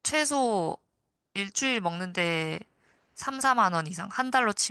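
No technical faults can be heard anywhere in this speech recording. Nothing in the audio points to a problem at any point.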